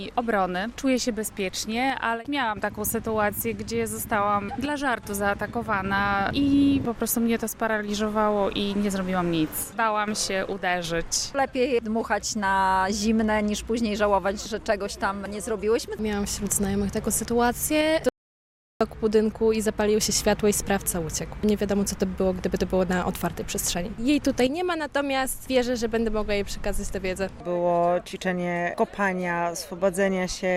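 The audio has a single audio dropout to silence from 18.09 to 18.81 s, a gap of about 720 ms where the sound stops mid-flow and resumes abruptly. Likely the input was briefly lost, through a disconnected device, failed link or accidental mute, while recording continued writing silence. What separates this from a natural pause or a noise gate is that the gap is silent with no room tone underneath, and whatever sounded during it is simply gone.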